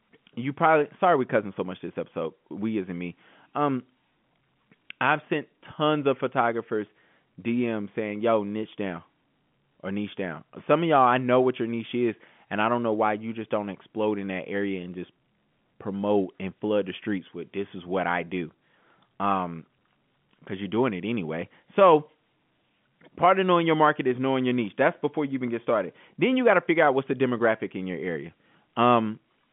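No technical faults can be heard anywhere in the speech. It comes over an ordinary G.711 telephone path, with the familiar narrow line band of roughly 150 Hz to 3.4 kHz and nothing at all above about 3.7 kHz.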